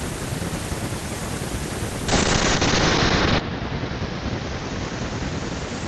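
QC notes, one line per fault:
2.09 s to the end: call bitrate drop. The bandwidth estimate fell and the encoder was starved of bits, consistent with roughly 32 kbps falling to 7 kbps. Audio turns rough and watery, top end cut from 20 kHz to 8 kHz, worst for 1.31 s.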